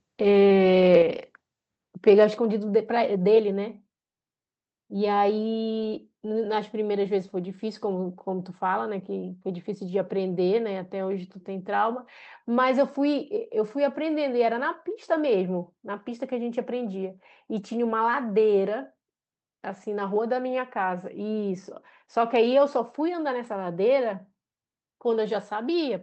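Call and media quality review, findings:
Microphone volume stepped down at 1.02 s and again at 2.37 s: whole signal, voice and background alike, drops about 5 dB in a single step and stays there. Likely call software auto gain control lowering the device input volume. A step, not a fade or momentary dip, so not a codec or network fault.

Microphone overload, 2.07 to 2.24 s: loudest syllables flattened, harsh crackling edge, peaks about 1 dB over the converter's limit with only a small fraction of samples cut. Likely input volume too high at the converter. Distortion sits only on peaks, unlike steady codec noise, and the second step-down follows shortly after.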